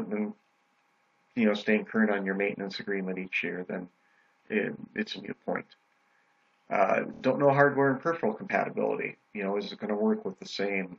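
A short stretch of audio repeats at 7.13 s, the mark of repeated frames. The same 26.1 ms slice plays three extra times in a row, through to 7.21 s. That sounds like a quick stutter. The repeated length points to a single compressed frame written or sent more than once, so the decoder played it again each time. The repeats add 78.4 ms, making the clip that much longer than the source.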